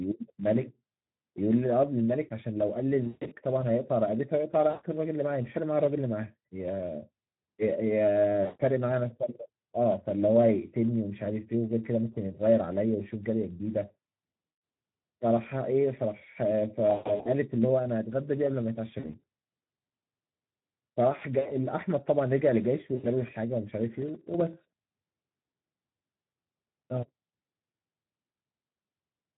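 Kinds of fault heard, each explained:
Speex codec: The speech sounds noisy and hoarse throughout, with a grainy edge that is plainly audible on every phrase. Speex is a CELP speech codec from older VoIP and game chat. It rebuilds the voice from a vocal-tract filter driven by a coded excitation signal, and at a low setting too few bits go to that excitation. The degree of roughness fits a mode around 11 kbps.
VoIP packet loss concealed by the speech codec: Short stretches of speech smear into a buzzy, held tone or coloured noise that fades, then the voice returns weak or distorted. This happens at 3.03, 4.69, 8.43, 14.47, 16.89, 18.99, 21.39 and 22.95 s, with gaps from about 60 to 220 ms. During each gap the decoder extended its last pitch and filter with falling gain, which blurs the speech. At 3.03, 16.89 and 18.99 s the gaps come in broken clusters.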